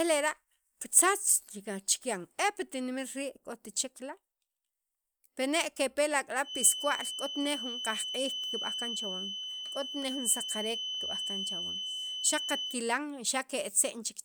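A speech recording with a feedback whistle running from 6.41 s to 12.81 s: a thin, steady tone at 3 kHz sitting only a few decibels below the speech and swelling and fading slowly in level. The likely cause is a loudspeaker-to-microphone loop held just at the edge of feedback, sustaining that one frequency without escalating. On a spectrogram it would show as a narrow horizontal line at 3 kHz across that span, and on the waveform as a thickening of the trace between syllables.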